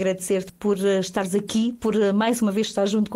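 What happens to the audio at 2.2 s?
At 2.2 s the audio is inside a jitter buffer speed-up running from 0.59 to 3.10 s. The receiver trims short pitch-period-length slices repeatedly to drain excess buffered audio, about a fifth of a second in total, so playback runs at 109% speed without a pitch change and sounds hurried.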